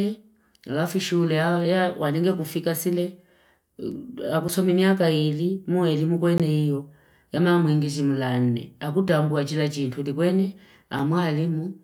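Blocks of digital silence hit at 4.48 s, just before "haka ili muelimu"; at 6.38 s, before "iyo yama mwingi jimulane"; at 9.09 s, before "ambu wajila jintu"; and at 10.99 s. Each is a hard, unfaded cut to silence, unlike a fade or a lone click. The 5.8 ms gaps fit a 256-sample buffer left unfilled, so they tick; the 17.4 ms one is a short hole.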